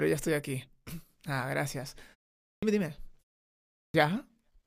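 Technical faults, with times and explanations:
2.57 s and 3.89 s, clipped start after a pause: Speech resumes abruptly after pauses of 0.5 s and 0.74 s. About 55 ms and 52 ms of each onset are missing. The output device drops into sleep during silence and needs time to wake before it passes sound again.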